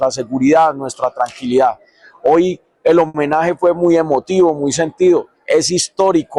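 At 3.07 s to 3.16 s there is a short stall from a late packet. The jitter buffer ran dry when a packet failed to arrive on time, so the receiver stretched the last sound for about 70 ms until it came, then resumed where it left off. Nothing is lost, but that moment is held unnaturally long with a slight buzz or dip, and everything after it runs about 70 ms late. On a spectrogram the harmonics run flat and unchanging across that stretch; the waveform shows a near-identical repeating cycle.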